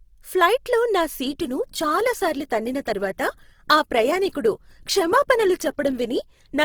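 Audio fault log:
1.23–6.65 s, adaptive stream at a lower bitrate: Right after "ఫ్లైట్లో నా", the speech quality drops abruptly, with no gap. Coding artefacts grow. The stream switched to a leaner encoding. It fits a move from about 64 to 16 kbit/s Opus.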